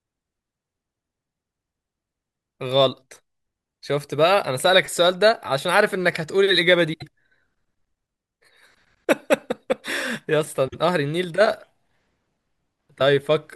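Frames out of order occur at 6.93 to 7.08 s and 10.68 to 10.78 s. Adjacent blocks of about 72 ms and 48 ms swap places, giving a brief garbled flutter. Nothing is lost, and the block sizes fit 24 ms codec frames.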